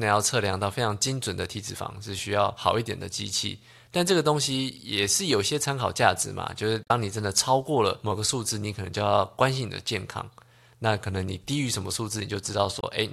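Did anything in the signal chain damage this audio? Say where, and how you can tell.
Yes, at the codec or storage stage: damaged data in the compressed stream. Brief glitches at 6.81–6.91 s and 12.77–12.83 s appear as abrupt discontinuities on a spectrogram. There the decoder misread corrupt frames and lost sync until it found a valid header.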